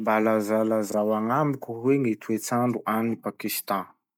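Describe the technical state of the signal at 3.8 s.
Nothing is wrong with the signal at 3.8 s. The speech there is intact, with no dropouts, clicks or distortion.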